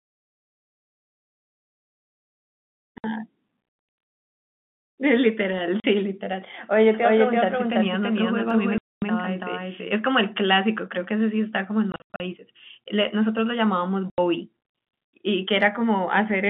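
Packet loss filled with silence first hits at 2.98 s, a 60 ms hole, then at 5.80 s (40 ms), 8.78 s (240 ms), 11.92 to 12.20 s (200 ms scattered in runs up to 80 ms) and 14.10 s (80 ms). Missing packets were replaced with silence, and every gap is a multiple of 20 ms, which points to 20 ms packets. The speech drops out abruptly, with hard edges.

A doubled audio track runs from 6.94 to 9.92 s. A second full-band copy of the speech, about as loud as the original, trails it by roughly 300 ms, likely from a slower capture path picking up the same signal. It has no room colour and starts and stops abruptly.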